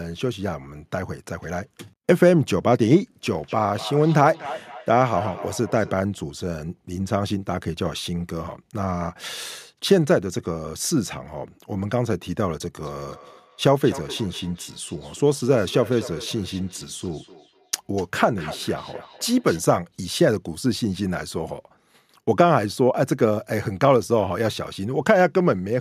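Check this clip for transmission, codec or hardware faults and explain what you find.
Two stretches of feedback echo between two devices turn up in this speech, from 3.26 to 5.99 s and again from 12.81 to 19.66 s. A second device in the same room is replaying the call, its sound gets back into the microphone, and the local echo canceller doesn't touch it. So each word returns roughly every third of a second, thinner and ringier, peaking at about -14 dB and then about -17 dB below the speech.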